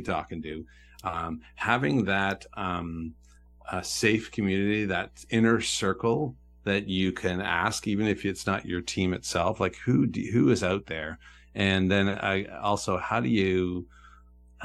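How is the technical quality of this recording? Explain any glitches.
A steady low drone of mains hum sits under the speech for the whole clip, a constant 60 Hz tone with a few faint low harmonics, roughly 30 dB below the speech. Power-line current is reaching the signal, most plausibly through a ground loop or a nearby transformer.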